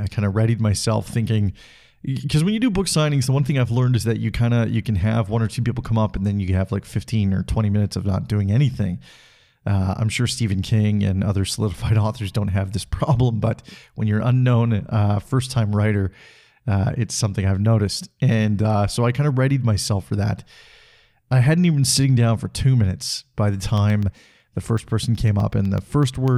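Speech, with periodic USB or driver dropouts from 23.78 to 26.28 s, after "two minutes by the". About twenty tiny silent gaps recur every 0.125 s, heard as regular ticks.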